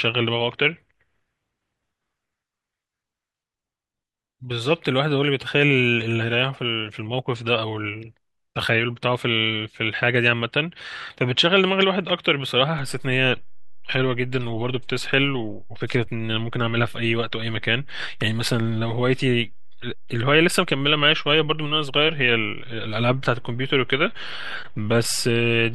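At 12.79 s there's a DC step: the zero line of the waveform suddenly jumps to a new offset of about −30 dBFS and stays there right through to the end, rather than stepping back or decaying. Something like an input carrying an offset being switched in, or a converter recalibrating, would do it. You hear it as a single low thump at that moment, while the speech itself carries on unchanged.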